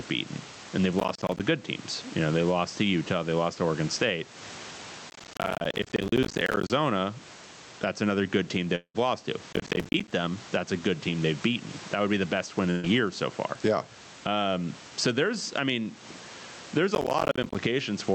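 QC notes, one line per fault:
Throughout, gain pumping: The level breathes in and out by around 15 dB. The background, about 29 dB below the speech, swells up in the pauses. It then ducks each time the speech gets loud. The likely cause is input gain set far too high, with a fast limiter or compressor clamping down on every loud moment. That pulls loud and soft parts closer together. The speech sounds squashed and the noise floor seems to pump.
0.99–1.40 s, 5.10–6.72 s, 9.53–10.11 s and 16.95–17.55 s, processor overload crackle: Four bursts of gritty crackle and tearing ride on the speech. The first falls between "beaten and they've" and "good teams". The second, at 5.10 s, is the longest, lasting 1.6 s. Each burst is a long run of missed processing deadlines. Every miss drops in a tiny hard-edged silent gap. The spacing fits a buffer of around 10 ms. The crackle stops once the load passes.
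8.75–8.96 s, long network dropout: After "another good team they", the last sound is stretched into a buzz that fades out over about 190 ms. A short moment of silence follows. About 200 ms of audio never plays. The sound then picks up at "lost to", further along, with that stretch gone. The pattern points to a network outage, with the receiver concealing the gap before it gives up.
12.70–12.85 s, burst of packet loss: Right after "be the best win", the sound freezes into a held buzz for about 130 ms. It fades as the gap goes on, and no true silence follows. About 140 ms of audio is missing. The speech resumes at "so far", skipping ahead. This is a short run of lost or late packets. The receiver concealed it by continuing and turning down the last sound.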